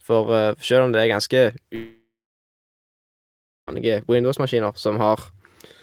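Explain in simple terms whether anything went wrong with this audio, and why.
From 1.75 s to 3.69 s the speech cuts out. For a moment the last sound smears into a fading buzz, and then there is near-silence for about one and a half seconds. When the voice returns it picks up further along, so roughly two seconds of speech is simply gone. This is a long network dropout. The likely cause is a stretch of audio that never arrived over the connection, with the player briefly filling the gap before giving up.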